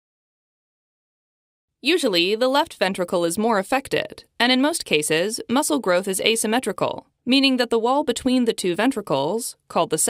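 No technical faults can be heard anywhere in the clip, so there is nothing to describe in time order.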